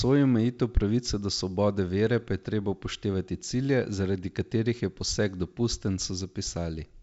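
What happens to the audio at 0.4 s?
At 0.4 s the audio is intact; the speech passes through G.722 wideband telephone coding with nothing going wrong at that moment.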